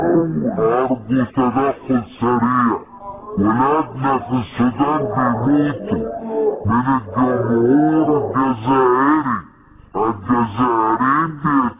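From start to finish the audio plays at half speed and a full octave low, the signature of a wrong sample rate: samples run out unconverted at half their intended rate, which fits 16 kHz material played back at 8 kHz, stretching durations to twice as long.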